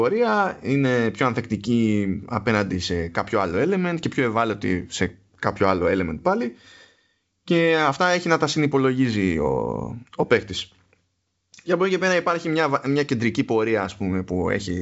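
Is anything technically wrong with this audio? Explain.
No, nothing is technically wrong with this audio.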